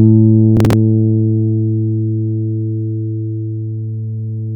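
From 0.57 to 0.73 s, processor overload crackle tears across the sound. The processor repeatedly missed short buffer deadlines, and each gap was filled with a hard-edged scrap of old audio. The gritty run fits roughly seven missed buffers of about 10 ms.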